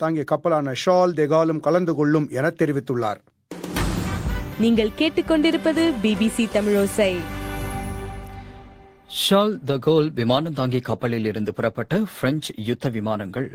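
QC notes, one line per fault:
9.53 s to end, call bitrate drop: sound turns rough and watery, as the encoder fell from about 32 kbps to 14 kbps after the bandwidth estimate dropped.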